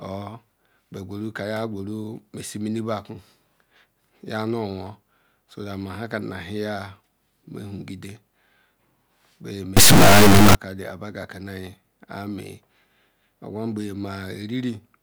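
From 9.77 to 10.55 s there's an integer read as float fault, which fits 32-bit integer samples being read as 32-bit float, so the sound becomes a blaring, clipped square-wave buzz.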